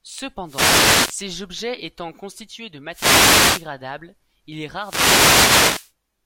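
Wireless microphone noise hits occur at 0.44–1.20 s (ending before "objets étant constitués de"), 2.89–3.70 s (just after "objets étant constitués de") and 4.77–5.93 s (after "il est"). Each time, the FM radio link fades, so receiver noise rises into a swish of static over the speech.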